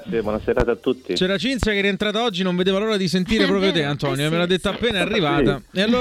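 Loud pops land at 0.60–0.64, 1.63–1.67 and 4.91–4.94 s, each a single sharp crack well above the sound, likely voltage spikes from a switch or driver glitch.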